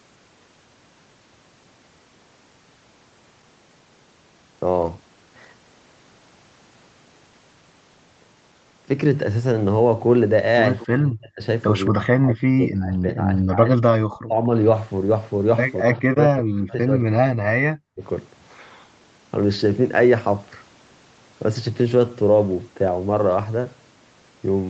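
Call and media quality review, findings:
Echo leak, 10.79–10.87 s: brief scrap of delayed voice, about 20 dB under the talker, lagging roughly 229 ms. Likely the far end's echo canceller letting a bit of loudspeaker pickup slip back through. Short and quiet.

Speech suppressed in double talk at 10.87–11.42, 11.89–13.78, 14.05–14.36 and 15.83–18.02 s: the talker dips hard, as much as about 40 dB. The two long stretches run around 2 s each. Likely the echo canceller couldn't tell local speech from echo while both sides talked, so it ducked everything. The band tops out near 8 kHz, which fits the wideband Opus path in use.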